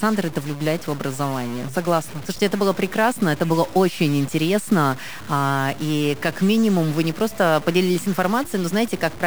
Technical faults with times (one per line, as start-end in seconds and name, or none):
0.00-9.26 stuck bit